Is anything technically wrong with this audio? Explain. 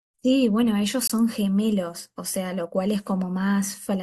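Yes. At 1.07 to 1.10 s the speech drops into a hard-edged silent hole of about 23 ms: a gap between stream segments, where mismatched timestamps left space the player padded with silence.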